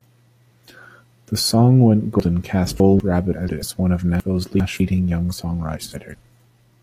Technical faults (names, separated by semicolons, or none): chunks out of order; frames out of order